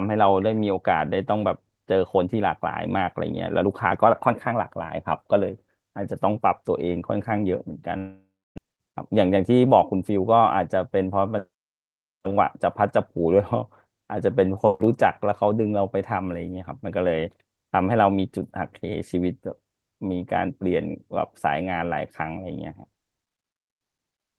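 Speech with two faults, both most likely from network delivery. From 7.97 to 8.60 s a long network dropout: the last sound stretches into a fading buzz, then about 0.29 s of silence, a blank band on the spectrogram, with roughly 0.4 s lost. Next, from 8.67 to 10.78 s, a jitter buffer speed-up plays about 109% fast to recover roughly 0.2 s of delay. Syllables appear compressed in time, but harmonic spacing stays unchanged.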